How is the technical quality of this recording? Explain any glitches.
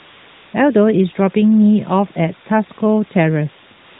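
The technical quality is poor, with two faults.

Low bit depth with dither runs through the whole recording. The signal has been reduced to very few amplitude steps, which fits 6-bit resolution, and dither was added before rounding so the error is spread evenly rather than tied to the waveform. Instead of gritty distortion, you hear a constant, uniform hiss beneath everything, only about 20 dB below the speech.

AMR comfort noise fills the first 0.54 s and again from 3.78 s to the end. In both stretches the phone decided nobody was talking and stopped sending speech frames. The receiver then generated artificial noise from a rough description of the background's level and spectral shape. The genuine room sound at the opening and close is replaced by a smooth, featureless wash that switches in and out where speech frames stop and resume. The band-limited, lightly coded character of the narrowband mobile link itself is also audible around it.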